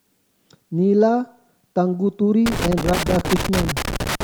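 From 2.46 s until the clip ends, loose connector crackle sets in: a worn contact keeps making and breaking, chopping the speech into an irregular scratchy burst. The waveform shows ragged gaps and sharp spikes, and the spectrogram shows broadband vertical streaks scattered unevenly.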